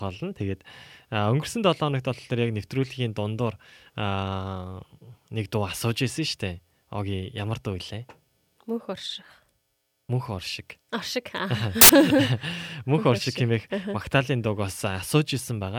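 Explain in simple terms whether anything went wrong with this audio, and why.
For a brief moment at 11.81 to 11.89 s, the player assembled each sample from the wrong bytes, reading them out of order or misaligned. The small, jittery details became the loudest part, so the speech is replaced by a short burst of harsh hiss.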